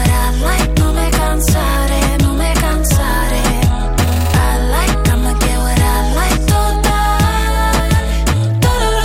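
No technical faults can be heard anywhere in the recording, and the signal holds steady throughout.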